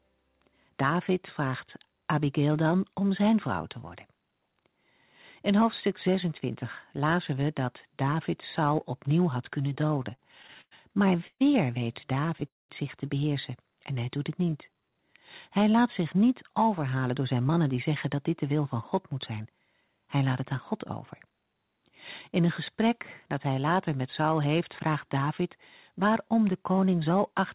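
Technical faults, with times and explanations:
9.7–10.73 s, repeated stalls (stutter): just after "opnieuw had kunnen" the sound catches and drags through twelve short gaps, the longest about 101 ms, filled by stretching the last sound. Packets arrived late, emptying the jitter buffer repeatedly; nothing is lost, only delayed.
11.27 s and 12.47 s, call audio freeze: two brief holds, about 0.13 s and 0.22 s, where the sound is carried on as a fading buzz or hiss and then goes quiet for about 60 ms and 190 ms. Likely packets held up in transit, draining the jitter buffer before playback resumed where it stopped.
13.92–15.18 s, jitter buffer slow-down: after "zich te beheersen" the speech runs at about 90% speed with unchanged pitch, sounds drawn out, roughly 138 ms added. The receiver repeated single pitch periods to rebuild its buffer reserve.
16.83–21.54 s, jitter buffer speed-up: after "laat zich niet" the speech runs about 8% fast at the same pitch, sounding hurried, with roughly 0.4 s cut in all. 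The buffer held excess audio, so the receiver trimmed short pitch-period pieces to reduce delay.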